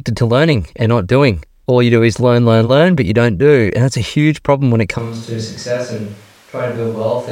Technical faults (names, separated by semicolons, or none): switch to a distant microphone